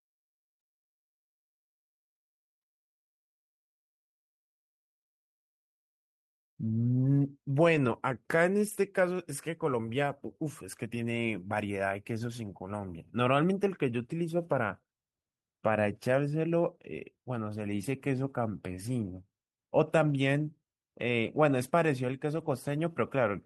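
Speech, with six short stretches where a lost packet was rebuilt from error correction: 7.75–7.77 s, 8.65–8.75 s, 12.19–12.33 s, 17.65–17.83 s, 20.09–20.15 s and 22.35–22.49 s. Nothing drops out. Instead, each stretch turns rougher and noisier for 20 to 100 ms. The packet that followed carried a low-bitrate copy of the missing audio. The decoder played that copy in place of the original. The lengths fit runs of one to five lost 20 ms packets.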